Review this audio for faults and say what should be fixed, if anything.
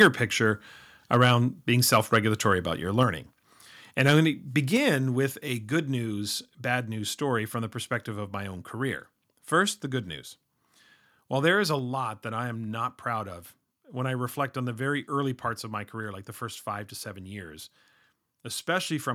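Harsh, crackling distortion marks the loudest syllables at 0.00–0.08, 1.13–1.32, 1.93–2.17 and 4.00–4.11 s. This is likely microphone overload. Peaks run about 4 to 6 dB past the converter's limit, so their tops are flattened.

Level drops abruptly at 0.02 s by about 2 dB and at 4.77 s by about 4 dB. Both voice and background step down together. This is likely the microphone volume being stepped down after clipping.

To prevent both, set the microphone input gain lower before recording and disable automatic input-level adjustment.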